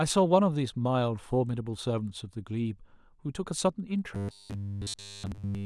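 From 4.15 s to the end of the clip at 5.65 s, the speech takes on a robotic sound from repeated short buffers. The voice becomes a rigid, metallic buzz fixed at 100 Hz. It loosely tracks the words. The likely cause is audio arriving too seldom, with the software looping a 10 ms slice to fill the gap. The repetition seems near total, so the real speech is almost entirely skipped.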